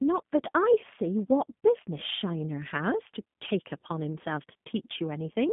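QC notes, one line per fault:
Throughout, G.729 codec: everything past roughly 3.6 kHz is gone and the low end sits above about 150 Hz, so it's thin, telephone-band speech. The rebuilt-from-a-model texture gives a plainly rough, slightly synthetic edge, which fits an 8 kbit/s G.729A link.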